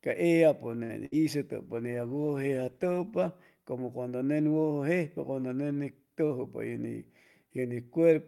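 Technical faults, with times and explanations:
0.83–0.91 s, short stall from a late packet: a packet showed up late, so the last sound gets held for about 61 ms, then picks up with nothing lost.
1.05–1.24 s, burst of packet loss: several packets went missing, so there's about 63 ms of fading concealment, then speech jumps ahead, skipping roughly 80 ms.
1.65–3.38 s, call bitrate drop: the encoder fell from 64 to 18 kbps for about 1.7 s, so speech goes coarse and muffled until just before "como cuando nen".
7.43–7.73 s, jitter buffer speed-up: the receiver trimmed roughly 40 ms of pitch periods to shed a backlog, so speech runs at 111% speed with the pitch unchanged.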